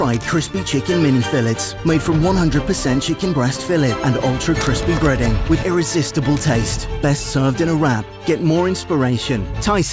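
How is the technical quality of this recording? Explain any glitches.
No glitches can be heard anywhere in this recording. The audio stays steady and continuous throughout, with nothing that interrupts or disturbs it.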